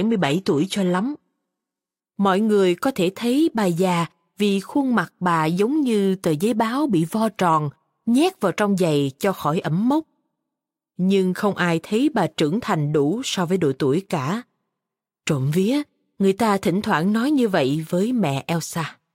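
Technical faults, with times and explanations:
0.00–2.00 s, adaptive stream starting at a low bitrate: the opening speech has dull or synthetic treble and stronger codec artefacts, pointing to a low-bitrate HE-AAC start before a sudden, gapless step up to better AAC-LC. The spectrogram shows nothing above 12.3 kHz.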